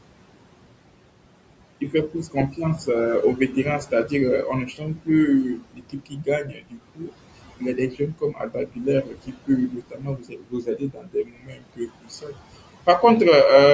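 Noise suppressor artifacts run through the whole clip. The suppressor pulls the room noise down by about 21 dB between phrases. Speech cut by the noise suppressor comes at 1.81 to 2.59 s, 3.36 to 4.12 s, 4.65 to 5.09 s, 5.55 to 7.17 s, 7.56 to 8.87 s, 9.03 to 9.49 s and 9.68 to 12.39 s. Parts of the speech were mistaken for noise and dropped by about 14 to 22 dB, so they sound swallowed and faint.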